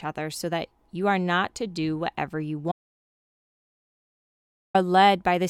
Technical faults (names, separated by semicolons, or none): audio dropout to silence